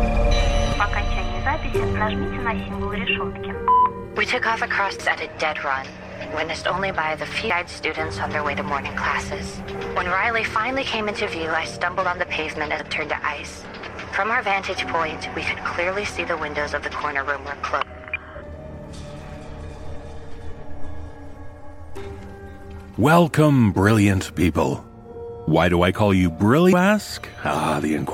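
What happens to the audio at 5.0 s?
At 4.99 s the compressed stream carries damaged data: the bytes there are corrupted, so the decoder cannot read the frame cleanly, loses its place in the bitstream and has to hunt for the next valid frame header before it can resume. The result is a single brief glitch at that instant, a quick chirp, squawk, click or short hole cutting through the audio, after which normal playback picks up again.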